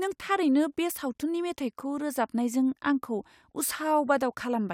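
No technical faults can be heard anywhere in the speech recording.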